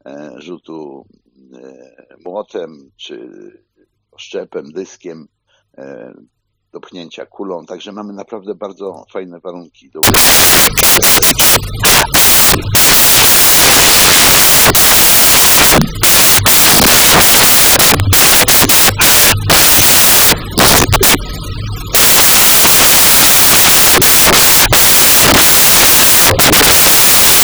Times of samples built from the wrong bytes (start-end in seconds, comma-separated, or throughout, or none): 10.03-27.43